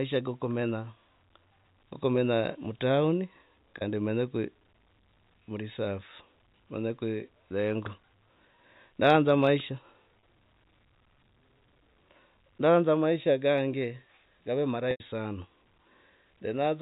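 Packet loss with pitch repetition occurs at 3.78 to 3.81 s, 10.20 to 10.23 s and 14.91 to 15.00 s over the G.711 telephone line. The first two gaps of about 30 ms are bridged by a repeated pitch period and sound briefly held and buzzy. The 90 ms gap, consistent with three consecutive lost packets, fades toward silence before the audio returns.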